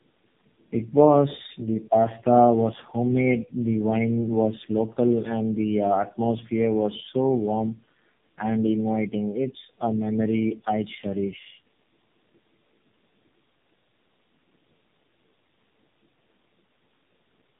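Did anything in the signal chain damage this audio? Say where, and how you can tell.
Yes: tandem speech coding runs throughout the clip, at the codec stage. The speech sounds rough, muffled and warbly, with nothing above about 3.8 kHz. That combination fits three low-rate speech codecs in a row, likely a GSM full-rate leg followed by two AMR-NB legs near 8 and 7.4 kbit/s, with G.711 links between them. At each border the call was decoded and re-encoded, so every coder modelled the previous one's artefacts and the damage stacked up.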